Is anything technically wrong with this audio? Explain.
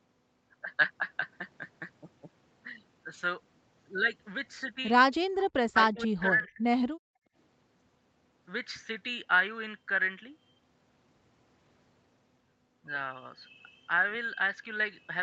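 Yes. There are two kinds of fault, both tied to echo cancellation on a call.

Speech suppressed in double talk occurs twice: briefly from 5.48 to 5.56 s, then from 5.73 to 6.65 s. The speech dips sharply, by about 40 dB at first and about 30 dB in the longer stretch. The likely cause is both sides talking at once. The canceller could not separate this talker from the far-end echo, so it pulled everything down.

Background gated by the echo canceller follows from 6.93 to 7.35 s. The room sound drops out for under half a second, by about 36 dB. The canceller clamped the microphone while the loudspeaker played. When it released, the background returned. The call's microphone processing caps the audio at 8 kHz, which is expected for this path.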